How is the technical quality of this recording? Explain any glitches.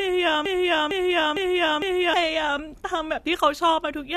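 There's one real glitch, a broken-record loop. From 0.46 s to 2.14 s, a 455 ms slice of the speech repeats four times back to back, identical every pass, so it stutters like a stuck disc. Likely the player or stream stalled and kept resending its last held fragment, so the audio that belonged in that stretch is simply missing.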